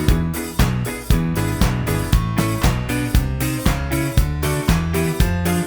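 No technical faults occur in the audio, so there is nothing to describe in time order.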